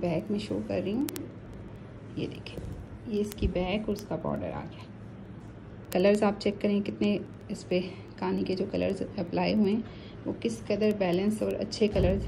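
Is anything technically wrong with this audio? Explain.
Yes. From 0.12 s to 12.25 s there are word clock ticks, roughly every 0.07 s. An unlocked receiving clock slips against the sender, dropping or repeating a sample, giving sharp, uneven ticks.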